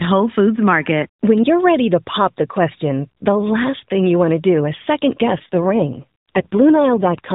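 From 5.26 to 7.34 s, just after "is second", an AMR rate drop makes the speech rougher and more synthetic. The sound points to a fall from the narrowband codec's 12.2 kbps to about 5.9 kbps. The band and continuity stay intact, unlike a dropout or bandwidth switch.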